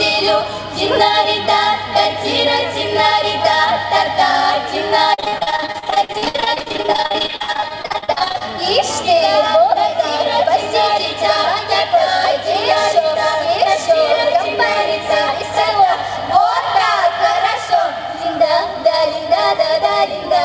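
From 5.14 to 8.42 s, repeated packet loss (robotic sound) leaves dozens of gaps up to 61 ms, patched by repeating prior sound: choppy, with smeared, stuttering blocks on the spectrogram.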